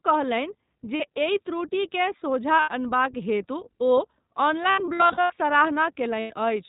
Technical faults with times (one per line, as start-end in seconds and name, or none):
0.00-6.68 iLBC codec
0.96-1.01 lost iLBC frames
2.60-2.69 lost iLBC frames
4.70-5.32 lost iLBC frames
6.20-6.32 lost iLBC frames